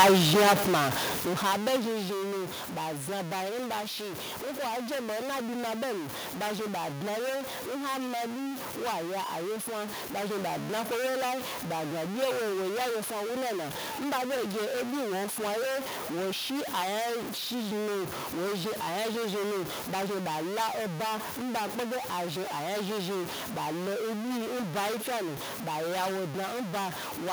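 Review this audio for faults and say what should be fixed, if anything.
A stuck bit runs through the whole speech recording: a distortion rides on every syllable, and the pauses never go quiet but fill with a steady noise floor. The likely cause is one data line or converter bit frozen at a fixed value, so roughly half the samples are shifted by that bit's weight. On a waveform the silent stretches sit offset from zero with a fuzzy, stepped texture; a spectrogram shows broadband grit through the pauses. Checking converter wiring and running a bit-pattern test on the interface would catch this before recording.

Automatic gain falling shapes the opening, from 0.05 s to 2.43 s. The speech starts loud and then sinks by about 14 dB over those two-odd seconds, with the background dropping along with it. The gain control judged the input too hot or its background noise too strong and pulled its gain down gradually rather than holding it steady. 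On a waveform the envelope tapers like a wedge across that span, and on a spectrogram everything fades in brightness together, noise floor included. Setting input level manually with the automatic gain control disabled would prevent the slide.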